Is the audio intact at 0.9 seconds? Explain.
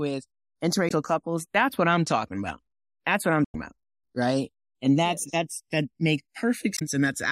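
No. From 0.88 to 0.92 s there is damaged data in the compressed stream: corrupted bytes make the decoder misread those frames, lose sync and hunt for the next valid frame header. The result is a brief 40 ms glitch.

At this moment the channels are also drifting apart. Their clocks differ by something like 100 ppm, so the inter-channel delay keeps creeping toward roughly half a millisecond. In a mono sum this sweeps comb-filter notches slowly across the spectrum, giving a slow flanging colour.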